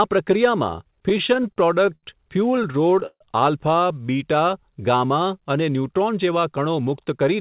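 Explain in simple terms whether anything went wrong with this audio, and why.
Two things went wrong, both from the network feeding the call.

From 0.84 to 2.05 s, and again from 2.57 to 3.22 s, there are repeated stalls (stutter). Audio kept arriving late, so the receiver's jitter buffer ran dry and it stretched the last bit of sound to cover each gap. The first stretch has 11 little hiccups, the longest 77 ms. The second has 7, up to 140 ms, so it drags more noticeably, with the longer holes fading out. Nothing is actually lost, it just sounds sticky.

Then from 6.01 to 7.35 s there's a jitter buffer speed-up. Too much audio had piled up, so the receiver quietly snipped out tiny slices, roughly 150 ms in all, to catch up. The speech runs about 9% fast but keeps the same pitch, so it sounds a bit rushed rather than squeaky.

All of this rides over the usual phone-call sound, with nothing above 4 kHz.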